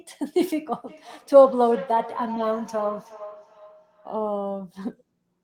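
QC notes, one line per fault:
0.87–4.23 s, feedback echo between two devices: the speech returns at a fixed spacing of roughly 0.4 s, peaking about 15 dB below the direct sound. A second device in the room replays the call into this microphone, and neither echo canceller removes the other's output.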